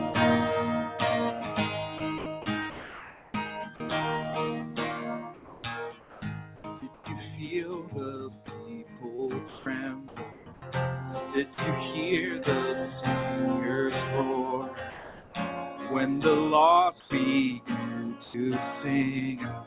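The audio is band-limited, with nothing above 4 kHz, which fits a narrowband call codec such as G.711, and it shows three kinds of voice-detector fault. Sound chopped by the voice detector occurs from 1.98 to 3.80 s and from 8.46 to 10.62 s. The detector likely switched between sending and not sending several times here, replacing roughly 0.8 s and 0.5 s of sound respectively with comfort noise. The result is choppy. On a spectrogram the detailed texture alternates with smooth, uniform patches, and the waveform envelope breaks up. Comfort noise in place of the background appears from 5.34 to 7.06 s, 17.00 to 17.10 s and 18.24 to 18.34 s. The real background is likely replaced by steady synthetic noise during transmission pauses, about 1 dB quieter at 17.0 s and at the same level at 18.24 s. These stretches look like flat, featureless bands with no fine structure. Sound dropped by the voice detector occurs at 6.94 to 7.06 s, 11.54 to 11.58 s and 14.90 to 15.34 s. 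The sound likely stopped being sent because the detector mistook it for background, so it gives way to steady noise. The longest gap is at 14.9 s. On a spectrogram the energy cuts off abruptly to a flat noise floor, then resumes.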